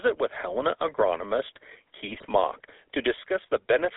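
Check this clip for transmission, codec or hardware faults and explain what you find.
Two faults are present: GSM full-rate coding throughout, and a burst of GSM bit errors near the middle.

GSM full-rate codec, throughout: the audio was squeezed through the original GSM coder, whose character fits its 13 kbps full-rate mode. It models the vocal tract and excites it with a sparse, regularly spaced pulse train, so the speech takes on a plainly audible buzzy, gravelly roughness. The line band confines everything to roughly 300 Hz to 3.6 kHz. On a spectrogram, energy stops sharply at both edges, and harmonics look smeared and grainy.

GSM bit errors, 2.05 to 2.26 s: corrupted bits reached the decoder for about a fifth of a second, consistent with an error rate near 1% across 11 20 ms frames. Wrong filter, pitch and gain parameters make the speech squawk, pop and gargle. The waveform shows jagged, irregular amplitude jumps frame by frame. 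The spectrogram shows blocky vertical slices with misplaced formants and sudden bright bursts.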